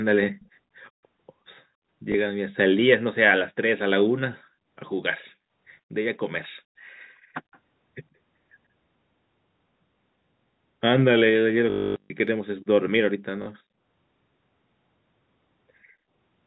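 At 0.40 to 0.45 s, a far-end echo canceller likely let through some of what its loudspeaker fed back into its microphone. This echo leak returns a faint copy of the speech about 130 ms late and roughly 35 dB below it.

At 2.12 to 2.14 s, one lost packet was covered by replaying the previous one. This packet loss with the last packet repeated causes a small blip.

The same echo leak recurs at 7.52 to 7.59 s, again as a faint scrap arriving about 130 ms behind the speech.

From 11.7 to 12.1 s, losses are scattered over 400 ms, with one run of 260 ms. The repeated packets produce a robotic, buzzing stutter at about 50 Hz, which fits 20 ms packets.

A final two-packet gap at 13.42 to 13.46 s gives a short stutter.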